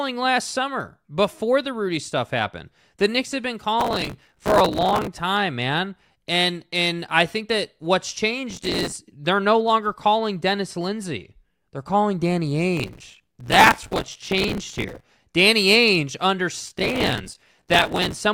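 Processor overload crackle tears through the speech at 3.80–5.07 s (after "have been"), 8.51–8.96 s (after "I think that what's"), 12.77–15.10 s and 16.67–18.17 s. Buffers of a few milliseconds repeatedly miss their deadlines and replay old audio, causing gritty crackle.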